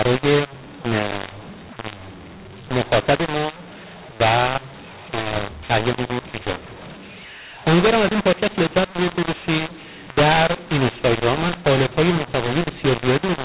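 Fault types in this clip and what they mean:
mu-law and A-law mixed up: Mu-law telephone audio is decoded as A-law throughout. Levels come out scrambled. Speech sounds harsh and distorted, and pauses fill with noise.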